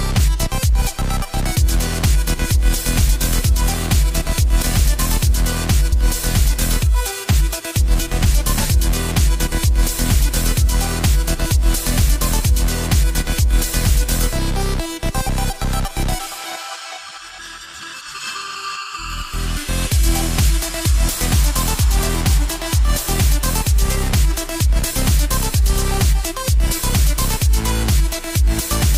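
At 4.62 s and again at 5.92 s, compressed frames are skipped. Whole frames never reach the output, so the audio jumps forward: about a tenth of a second at the first point, about three tenths at the second, each a multiple of a frame near 93 ms. A waveform shows an abrupt change in envelope, and a spectrogram shows a vertical seam where the patterns fail to continue.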